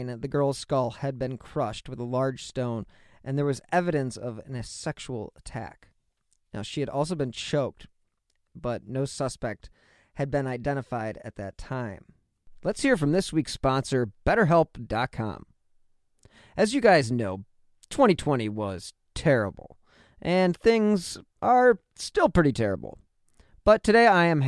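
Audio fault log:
No faults are heard anywhere in this speech recording.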